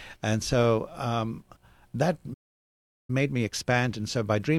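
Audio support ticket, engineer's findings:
Playback stall, 2.33 to 3.10 s, right after "so um that": speech drops to silence for about 0.75 s mid-flow, then resumes. Likely player buffer underrun or blocked output thread starving the device until data arrived again.

Time-compressed catch-up, 3.10 to 4.58 s, following the stall: speech runs hurried at about 1.25x with pitch unchanged. Player trimming its backlog by cutting and cross-fading short segments to regain real-time position.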